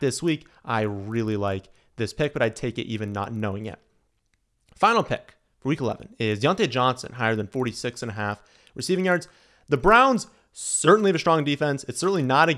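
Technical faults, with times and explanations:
Throughout: resampler restarted on every block, a 25 Hz buzz under the speech, as each 40 ms block was converted alone, leaving an error at every edge.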